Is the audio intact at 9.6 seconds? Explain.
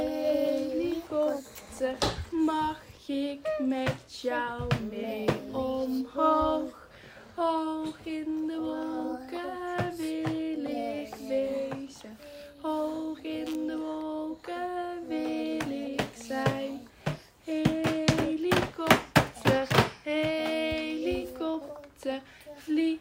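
Yes, the audio is intact at 9.6 seconds, with no dropout, click, distortion or other fault at that moment.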